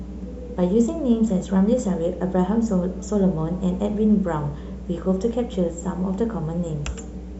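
A ground loop or a nearby power transformer is coupling the 60 Hz mains supply into the signal path, and the result is mains hum running from start to finish under the speech. It sits at about 15 dB below the speech level, a steady low drone at 60 Hz, with some low harmonics stacked above it. The drone never changes.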